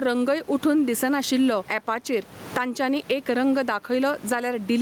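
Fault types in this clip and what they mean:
gain pumping: Input gain likely far too high; a fast limiter clamps each loud syllable, so background swells about 15 dB in pauses and speech sounds squashed.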